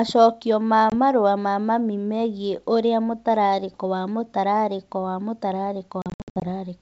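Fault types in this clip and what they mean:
Packet loss on an ADPCM call: hard silent holes near 0.90 s and 6.02–6.45 s, then slightly distorted recovery while the decoder's predictor resyncs, unlike clean dropouts.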